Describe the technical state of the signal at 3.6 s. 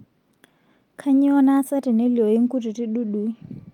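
Nothing is wrong with the signal at 3.6 s; the speech runs through that point intact, with no dropout, click, distortion or other fault to be heard.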